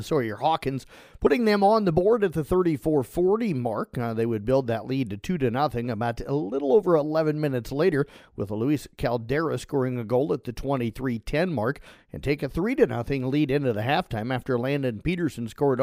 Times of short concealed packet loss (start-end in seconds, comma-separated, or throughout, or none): none